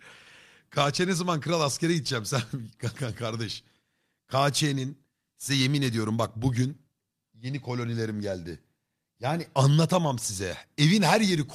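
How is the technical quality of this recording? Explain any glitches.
No technical glitches can be heard in this recording.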